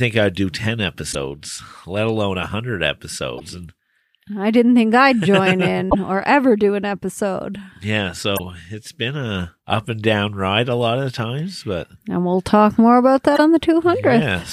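Speech, interrupted five times by damaged data in a compressed stream: short chirps or blips at 1.09–1.15 s, 3.36–3.41 s, 5.87–5.95 s, 8.35–8.40 s and 13.34–13.39 s, each about 50 to 85 ms long. Corrupted bytes in the encoded file make the decoder misread those frames and lose sync until it finds the next valid frame header.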